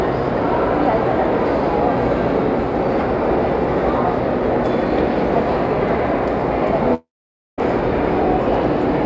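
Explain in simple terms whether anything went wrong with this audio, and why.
From 6.94 to 7.60 s the sound trails off into a fading buzz, then goes silent. This is likely a long network dropout: audio never arrived, so that part is lost.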